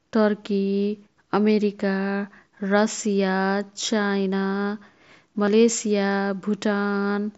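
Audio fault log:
5.46 s and 6.91 s, concealed Bluetooth headset packet loss: twice, about 15 ms of voice data failed to cross the wireless link between headset and phone, which fits two lost frames each time. The receiver patched each gap by repeating the closest-matching stretch of the preceding waveform, so the level holds steady and no click or silence appears.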